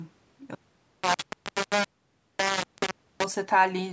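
From 0.55 s to 3.24 s the speech turns harsh and grainy, with distortion nearly as loud as the speech riding on every syllable and quiet moments sputtering out. This is likely low bit depth without dither: samples rounded to 3 bits, so the error follows the signal.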